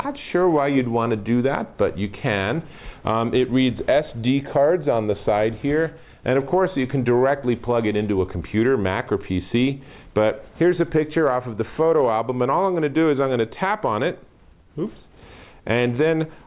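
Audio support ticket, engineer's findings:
No faults found on listening.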